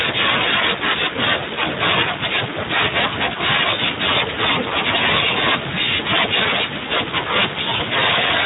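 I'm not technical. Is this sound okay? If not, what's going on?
No. From start to finish the speech has been squeezed by the Speex codec, an older voice-chat compression scheme. It keeps too little detail, so voices sound hoarse and noisy, and everything above roughly 3.8 kHz is missing, giving a muffled, telephone-like tone.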